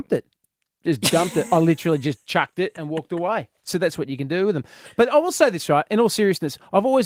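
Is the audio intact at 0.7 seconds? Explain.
Yes, the speech at 0.7 s is intact, with no fault at that moment.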